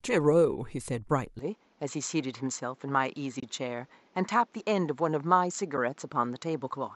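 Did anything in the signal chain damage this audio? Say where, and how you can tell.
Yes. From 1.39 s to the end, the input was likely switched to a poorer device. The band stops at 7.6 kHz, the level falls about 5 dB, and a new noise floor appears roughly 35 dB down, with no gap at the switch. Because tone, level and noise change together, this is a device change, not a codec low-pass.

At the network and codec stage, there is AAC frame loss with muting at 3.40–3.43 s (30 ms, which fits three 10 ms frames) and at 5.77 s (10 ms). The decoder zeroed those frames, and the overlapping windows fade the sound out and back in. That produces a soft-edged hole and a brief dip, not the clicks of a hard buffer dropout.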